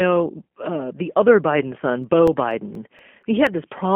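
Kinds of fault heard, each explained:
G.729 codec: Speech is squeezed through a low-rate VoIP coder that rebuilds each short frame from a vocal tract model, a pitch predictor and a few pulses, which fits an 8 kbit/s G.729A stream. Here the damage is plainly audible, with a rough, synthetic edge throughout. On a spectrogram the band sits between 200 Hz and 3.4 kHz, with a hard ceiling at 3.4 kHz, empty space above it, and smeared harmonics.
CD scratch ticks: A disc blemish corrupts more data than error correction can repair once per rotation, so the player patches or mutes the damaged samples. Between 2.04 and 3.47 s there are seven ticks, roughly five a second, each very short, no more than a millisecond or two. On a waveform they appear as tiny spikes or brief flattened gaps at a steady spacing. On a spectrogram they appear as thin vertical lines spanning the band.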